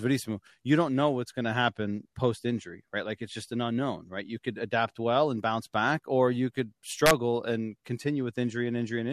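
At 7.06 to 7.11 s, just after "back or you could", the speech hits integer overflow: peaks pushed about 3 dB past the integer limit wrap to the opposite sign instead of being held, flipping across the full range and producing a violent crack far harsher than clipping.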